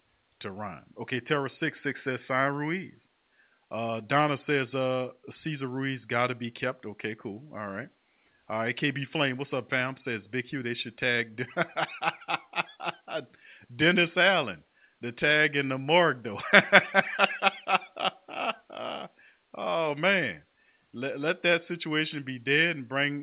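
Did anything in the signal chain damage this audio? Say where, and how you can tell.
No signal chain damage found.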